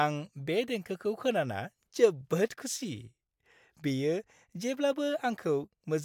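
Nothing technical to flag in this bit of speech; no faults turn up anywhere in it.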